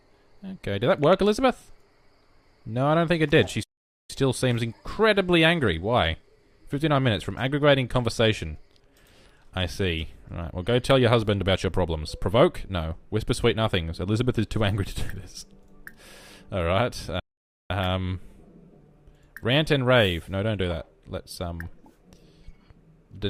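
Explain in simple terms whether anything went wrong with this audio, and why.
The sound cuts to silence twice, from 3.63 to 4.10 s and from 17.20 to 17.70 s, each time for about half a second. This is a playback stall, likely the player running short of data. A dropout is a tiny blink; these pauses are long enough to notice.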